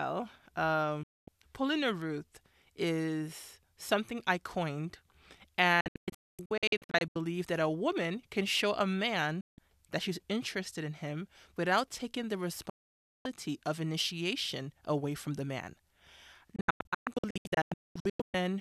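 Digital broadcast dropouts occur at 1.03–1.28 s, 5.81–7.16 s, 9.41–9.58 s, 12.70–13.26 s (ending before "of initiation away from") and 16.56–18.34 s. The receiver stopped getting valid frames and muted them. The sound fades out within 3 ms and is lost until it resumes. The second and last dropouts break into several short holes, none longer than 0.24 s.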